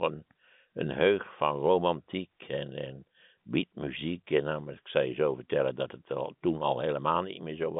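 No faults can be heard.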